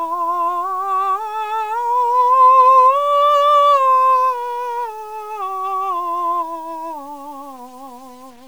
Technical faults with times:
0.00-8.48 low bit depth without dither

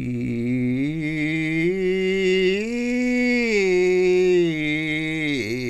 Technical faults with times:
none

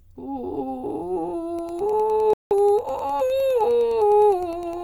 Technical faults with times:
1.49-4.84 Wi-Fi interference
2.33-2.51 rebuffering stall

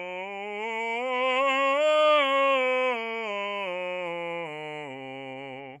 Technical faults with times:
none

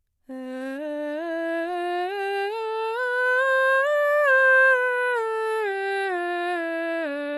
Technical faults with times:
0.00-7.38 HE-AAC compression

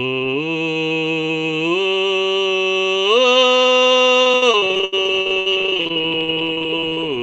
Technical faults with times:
4.23-7.04 repeated packet loss (robotic sound)

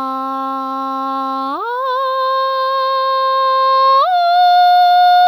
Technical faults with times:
none

